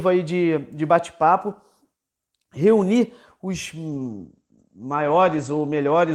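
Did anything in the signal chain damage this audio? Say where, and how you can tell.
Yes. The damage is a call bitrate drop at the codec stage, driven by the network. From 3.89 s to the end, the speech turns rough and muffled. The top end collapses from about 20 kHz to 8 kHz. The encoder was told to spend fewer bits, falling from 32 kbps to 14 kbps after the call's bandwidth estimate dropped. It coded coarsely and cut the highs. The worst stretch lasts about 1.64 s, with no recovery before the clip ends.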